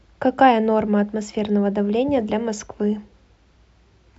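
No technical faults can be heard anywhere in this speech recording. There is no moment in it that needs a time or an explanation.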